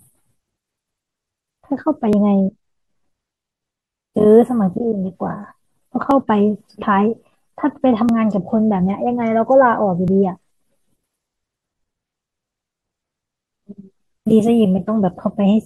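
Neighbouring 2-second stream segments overlap in their timestamps, so the player trims sound that was never actually duplicated, an overlap between stream segments. In this speech clip, about 5 to 17 milliseconds vanish each time and the waveform jumps, giving clicks or tiny skips at 2.13, 4.12, 6.11, 8.09 and 10.08 s.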